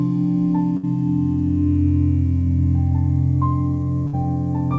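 At 0.77 s there's a burst of packet loss lasting until about 0.86 s. A short run of packets went missing, so the receiver stretched the last bit of sound for about 60 ms, fading it into a buzz or hiss. Then the audio picks up again with roughly 60 ms skipped. The same thing happens again from 4.07 to 4.16 s. All of this rides over a G.722 call path with nothing above 8 kHz.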